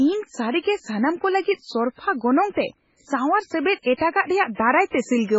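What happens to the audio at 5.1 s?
At 5.1 s you're hearing MP3 compression that runs through the whole clip: speech cut off above 7.6 kHz and watery, swirly smearing, likely from a starved bitrate around 16 kbps.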